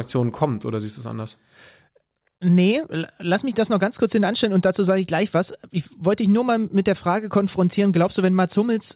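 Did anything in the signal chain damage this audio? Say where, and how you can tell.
No, nothing in the chain damaged this speech: it went over a WebRTC call path using G.711 mu-law at 64 kbps, and the absence of anything above 4 kHz is simply that codec's normal bandwidth.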